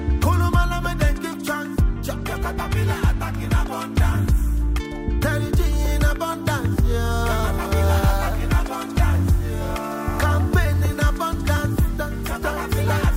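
Low bit depth without dither runs from 7.23 s to the end. The sound turns gritty and grainy, with distortion that tracks the signal and sits around 30 dB below it. The likely cause is rounding to roughly a 7-bit word without dither.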